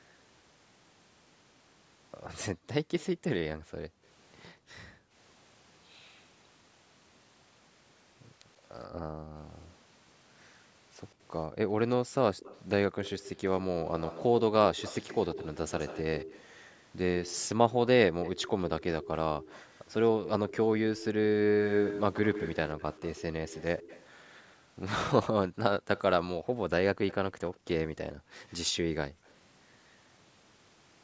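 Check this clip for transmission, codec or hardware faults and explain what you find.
Two fault types appear, both from echo handling on a hands-free call.

Background gated by the echo canceller occurs at 2.53 to 5.15 s, 8.9 to 9.35 s and 25.48 to 29.25 s. While the far-end loudspeaker was active, the canceller's suppressor cut the microphone path hard, so the room sound dips by up to about 40, 34 and 31 dB respectively, then recovers when suppression releases. The dropouts total roughly a second, half a second and under a second in those spans.

A delayed copy of the speech appears, an echo leak, likely because the echo canceller on a loudspeaker-side device left residual echo that was sent back. It arrives 128 to 136 ms behind the original. There is a brief scrap at 2.99 to 3.05 s, about 25 dB down. A sustained stretch from 12.37 to 24.05 s is the most audible at about 10 dB down, and another runs from 25.97 to 29.32 s at about 20 dB down.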